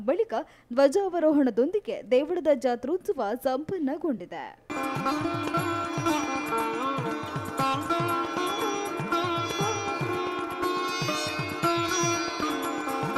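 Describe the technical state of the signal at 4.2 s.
Lost LE Audio frames at 4.18 to 4.20 s: about 20 ms went missing, fitting two 10 ms frames. The LC3 decoder refilled the gap with the previous spectrum under random signs, leaving a brief noisy smear.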